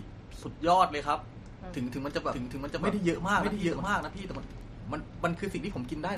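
MP3 compression runs through the whole speech clip: nothing survives above 15.2 kHz, and the watery, swirly smearing points to a low bitrate near 48 kbps, likely an MP3 encode starving the weaker frequency lines. A doubled audio track appears from 2.31 to 4.61 s, where a second full-band copy, about as loud as the original, trails it by roughly half a second. It has no room colour and cuts in and out abruptly, likely from a second, slower capture path or an edit holding two offset copies.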